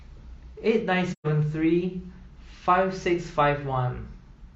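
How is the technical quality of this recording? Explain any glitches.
One glitch stands out in the speech, from 1.12 to 1.26 s: AAC frame loss with muting. Compressed frames failed to arrive, and the decoder filled the gap with silence by zeroing the spectrum instead of guessing at the missing sound. Because AAC frames overlap, the audio tapers down into the gap and back up after it rather than cutting sharply. The hole lasts about 128 ms, which fits roughly three lost frames, and its edges are soft.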